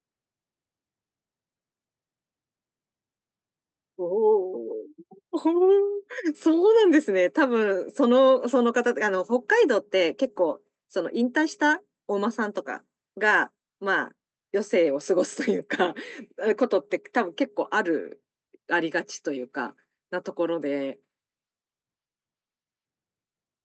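No faults are audible in the speech; the call path passes it normally, with the top end rolling off around 8 kHz as expected for a call codec at a moderate bitrate.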